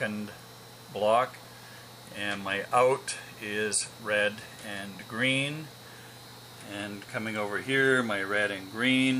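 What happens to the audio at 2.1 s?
At 2.1 s you're hearing low bit depth with dither, and it isn't a one-off event there; it runs through the whole clip, so that moment simply sits inside it. The sound has been squeezed down to about 8 bits, with a little random noise mixed in before rounding. That turns what would be gritty quantisation distortion into a steady, even hiss, sitting only around 25 dB below the signal, so it's plainly audible, but clean rather than crunchy.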